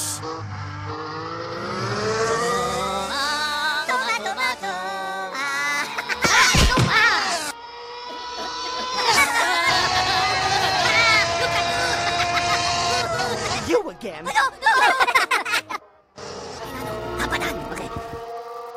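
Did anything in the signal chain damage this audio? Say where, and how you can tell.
Yes: an unreliable data bit at the converter or digital interface, from 16.78 s to the end at 18.76 s. A marginal line flips randomly, adding same-size spikes of about -36 dBFS, so the steady fizz continues through the pauses.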